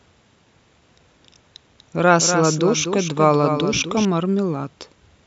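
At 1.79 s the speech picks up a doubled audio track: a second, fainter copy of the same speech trailing the original by about a fifth of a second and sitting roughly 10 dB down. It's full-band and dry, with no room tail, and it cuts in and drops out abruptly at 4.05 s. That pattern most likely comes from the signal being captured twice, once through a slower path, so both copies end up in the mix.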